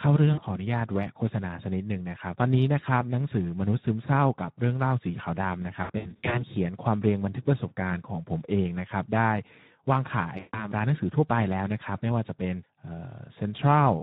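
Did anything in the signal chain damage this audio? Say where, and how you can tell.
Yes. At the codec stage, the whole clip carries Speex codec damage. The speech sounds hoarse and noisy throughout, because the CELP coder has too few bits to model the excitation. Any content above 4 kHz is a shaped noise fill, not real detail. The coarseness fits a rate of around 11 kbps. A poor microphone or analogue noise would add hiss alongside clean speech, but here the roughness is part of the speech itself.

At the network stage, VoIP packet loss concealed by the speech codec shows up three times: 0.33–0.43 s (about 40 ms lost), 5.83–6.44 s (about 280 ms lost, scattered over roughly 480 ms, with the longest gap 80 ms), and 10.37–10.68 s (about 160 ms lost). In each, the decoder stretches the last sound into a buzzy tone or coloured noise that fades, and the speech stays weak for a while after packets resume. 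A plain dropout would be silence or a click, not a synthetic, decaying tail.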